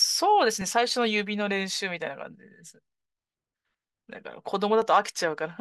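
From about 0.61 s to 4.82 s there's a regular click in the speech, coming back every 1.4 s, four or so in all. That steady spacing points to clock drift buffer slips. The likely cause is two devices running on separate clocks, off from each other by something like 700 parts per million. The buffer between them creeps until a chunk of roughly fifty samples gets dropped or repeated, and each slip lands as a click.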